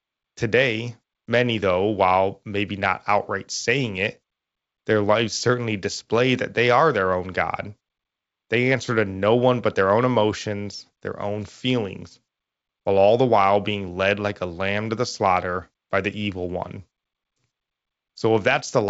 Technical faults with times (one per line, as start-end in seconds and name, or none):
none